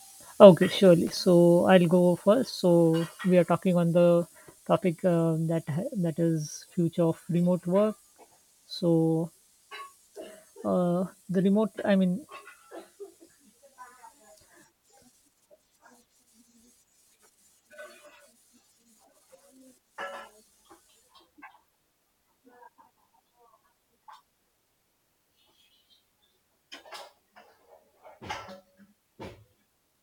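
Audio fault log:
1.07–1.17 s, loose connector crackle. A brief, irregular burst of scratchy crackle lasts about 0.1 s, just before "I'll go". A worn or dirty contact is making and breaking rapidly. The speech is chopped.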